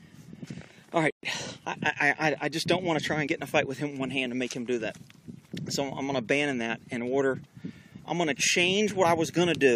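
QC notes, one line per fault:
0.43–0.45 s, damaged data in a compressed stream: a short glitch. Some of the coded bytes there were corrupt, so the decoder garbled that frame, lost sync and hunted for the next good frame header before carrying on.
1.10–1.23 s, playback stall: the audio cuts out mid-flow for about 126 ms, then carries on. That gap is likely the player running dry of data or its thread getting blocked, leaving the output silent until it recovered.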